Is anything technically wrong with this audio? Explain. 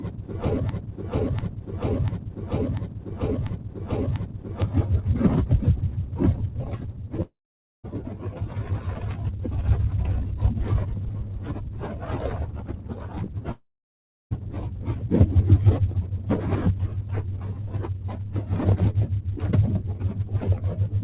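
Yes, there are several faults. From the start until 4.62 s, a 0.69 s fragment repeats exactly six times back to back, already under way as the clip opens. This broken-record loop likely comes from a stalled player or stream resending its last piece. Unlike a dropout, it keeps looping instead of fading. At 7.22 s and 13.52 s, long network dropouts likely remove about 0.62 s and 0.80 s of sound. A brief fading buzz gives way to silence lasting about 0.5 s and 0.69 s, then the audio resumes further on. Around 17.95–18.29 s, the noise suppressor cuts this sound, lowering it by up to about 4 dB for roughly a fifth of a second. That is a partial dip rather than a gap, so nothing is lost outright. The call codec path, which fits G.711, leaves nothing above 4 kHz.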